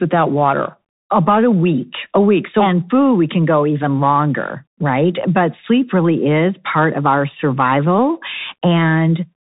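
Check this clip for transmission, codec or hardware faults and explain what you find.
There is one codec fault, and it runs through the whole speech clip.

Bluetooth CVSD headset codec, throughout: each sample is coded as a single up-or-down bit with an adaptive step, which fits a 64 kbps headset link. Nothing passes above about 3.8 kHz. Loud high sounds outrun the step and distort, s sounds turn scratchy, and a granular hiss sits under the speech; the damage is plainly audible.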